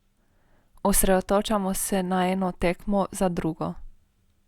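No technical faults can be heard anywhere here.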